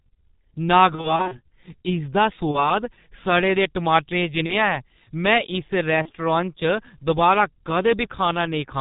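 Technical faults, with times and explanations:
Throughout, G.723.1 codec: the speech has passed through an early internet-telephony coder working in 30 ms frames, and its heavy damage fits a rate of about 6.3 kbit/s. Nothing above 4 kHz survives, so the speech is muffled. The slow-updating voice model gives a hoarse, rough quality and smears consonants that change faster than a 30 ms frame can follow.
0.95 to 1.39 s, 2.51 to 2.71 s, 4.46 to 4.77 s and 6.02 to 6.12 s, VoIP packet loss concealed by the speech codec: packets went missing and the decoder filled each gap by repeating its last pitch and filter at falling gain. The first stretch sounds like several short 30 ms dropouts scattered over about 360 ms. The later three each sound like a single lost frame. Each gap turns into a brief buzzy or noisy smear, and the speech stays weak and distorted for a moment afterwards while the decoder recovers.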